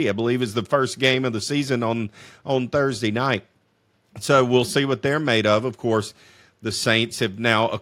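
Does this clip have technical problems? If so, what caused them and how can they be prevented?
No, the recording shows no audible technical faults, so there is nothing here that needs preventing.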